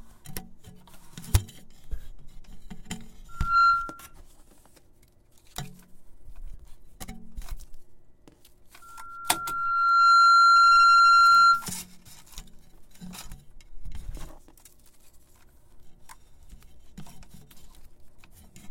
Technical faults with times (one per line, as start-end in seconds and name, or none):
3.28-4.14 loudspeaker feedback squeal
8.82-11.70 loudspeaker feedback squeal